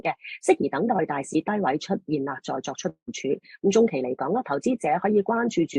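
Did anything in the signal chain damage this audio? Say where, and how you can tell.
Yes. From 2.89 to 3.10 s the sound stops and the last moment is carried on as a fading buzz or hiss, then about 90 ms of silence, and the audio resumes with roughly 180 ms lost. This is likely a long network dropout. On a spectrogram, a smeared, decaying band gives way to a blank gap before normal content returns.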